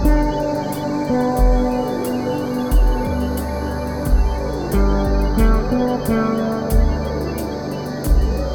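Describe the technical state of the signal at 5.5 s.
A faint high whistle, wandering between about 6.0 and 6.4 kHz and roughly 35 dB below the signal, is present at 5.5 s and throughout. This is switching supply whistle, from a switching power supply running in an audible burst mode or beating with another supply.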